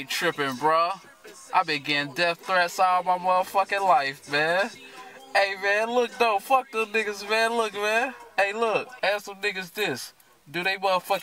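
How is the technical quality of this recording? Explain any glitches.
Nothing glitchy turns up anywhere in the recording, so there's no fault to explain here.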